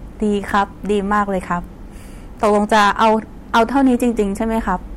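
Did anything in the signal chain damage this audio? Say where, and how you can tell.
Yes. Hard clipping runs through the whole speech clip. The level reaching a converter or a fixed-point format conversion was about 11 dB too hot, so every peak over full scale was sliced flat. Roughly 3 percent of samples went over the limit. On a waveform the loudest peaks show squared-off plateaus. A spectrogram shows broadband vertical streaks of harmonics reaching into the high kHz range at each peak.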